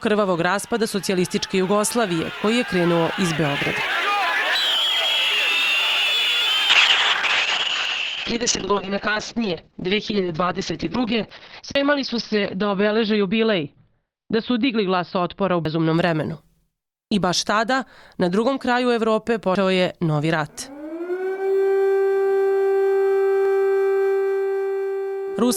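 At 3.95 s the audio skips: about a tenth of a second is gone and the two sides butt together with no gap. This is audio missing between chunks, likely from a recorder dropping a slice each time it closes one roughly 4 s block and opens the next. It recurs at 7.85, 11.75, 15.65, 19.55 and 23.45 s.

From 6.71 s to 16.23 s a call bitrate drop takes the encoder from 64 kbps to 7 kbps, holding the lowest rate for 5.76 s. Bandwidth narrows from 20 kHz to 6 kHz, so the sound turns muffled and coarsely coded, rough and watery, until the rate recovers.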